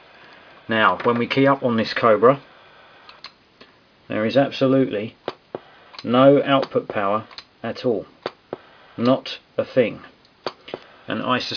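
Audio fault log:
No fault is logged for this clip.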